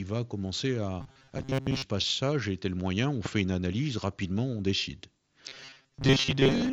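From 1.01 to 1.82 s, between "va commencer" and "passe ça j'ai tel", the speech turns into robotic sound from repeated short buffers: a rigid, metallic buzz at 134 Hz. This likely comes from late audio being covered by looping roughly 7.5 ms chunks, which stand in for most of the real signal. On a spectrogram it shows as evenly spaced horizontal harmonics, and the waveform shows identical short cycles. The same buzz returns from 5.48 s, just after "analyse rapidement on décide", and runs to the end.

At 3.26 to 3.28 s, after "j'ai tel moyen on", a single loud pop peaks about 10 dB above the speech, likely from an electrical step or driver glitch. It appears as a full-height vertical stripe on the spectrogram and a sharp spike in the waveform.

Throughout, the Bluetooth mSBC headset codec leaves nothing above 8 kHz.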